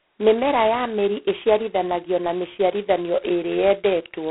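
From start to finish the speech is carried through G.726 ADPCM coding at a very coarse step size, which fits the 16 kbit/s mode. Each sample stores only a small difference from a running prediction, so the errors form a harsh, rasping hiss that rises and falls with the speech level. On a spectrogram the energy sits in a telephone band from about 150 Hz to 3.5 kHz, with nothing above 3.9 kHz, and speech-shaped grainy noise fills the gaps between harmonics.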